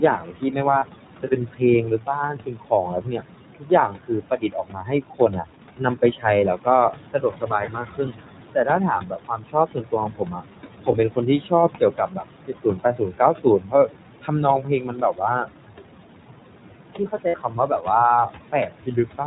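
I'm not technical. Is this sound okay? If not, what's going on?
No. Four things are wrong with this speech.

Noise suppressor artifacts run through the whole clip. A noise suppressor tries to remove steady background noise by turning down the parts it thinks are noise, updating many times a second. Here it cuts hard. The room noise, which is a normal part of the recording, drops away between phrases and comes back under the voice.

The iLBC codec damage is also present throughout and plainly audible. iLBC is an internet-calling format that squeezes the voice into small packets of 20 ms each and keeps only the lower part of the sound. Everything above 4 kHz is gone, so the voice sounds muffled and narrow, like an older phone line, with a slightly rough, artificial edge.

Speech cut by the noise suppressor happens from 0.01 to 15.48 s and again from 16.94 to 19.21 s. In the first stretch, about five seconds in total is affected. 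In the second, about half a second is. In both, the suppressor mistook quiet parts of the speech, such as soft consonants and word endings, for noise and turned them down. Those sounds come across as swallowed or faint.

Lost iLBC frames are gaps where packets never arrived. Single frames went missing at 0.80 to 0.84 s, 2.82 to 2.85 s, 7.66 to 7.69 s and 10.92 to 10.96 s. Three in a row were lost at 17.28 to 17.36 s. To fill each gap, the receiver repeated the last bit of voice mixed with noise, which gives a brief buzzy, held sound. The 17.28 s gap is the longest. The voice recovers right after each one.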